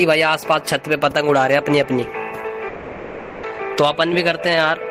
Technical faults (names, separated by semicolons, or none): long network dropout